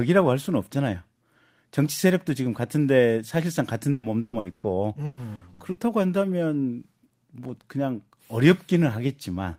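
Repeated packet loss (robotic sound) occurs from 3.91 to 4.66 s and again from 5.05 to 5.80 s. Four gaps each, up to 120 ms, are patched with repeated sound, giving choppy speech with pieces missing.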